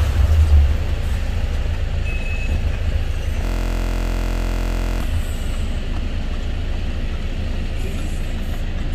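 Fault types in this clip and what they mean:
System hang loop: from 3.45 to 5.01 s the computer or its audio driver stalled while the sound hardware kept replaying the same stretch of its ring buffer. A single 23.22 ms slice, which fits a 1024-sample buffer, repeats exactly around 67 times. Because the loop is so short, it comes across as a steady, mechanical buzz at about 43.1 Hz rather than a stutter, until normal playback resumes at 5.01 s.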